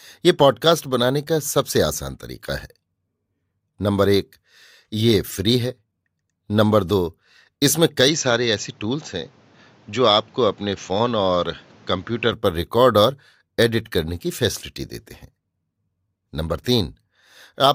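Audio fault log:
8.08–12.33 s, input switched to a poorer device: the speech abruptly loses everything above 7.6 kHz and turns duller, with new background noise roughly 30 dB down, then clears again. There is no gap and no level jump, likely a change to a narrower-band microphone.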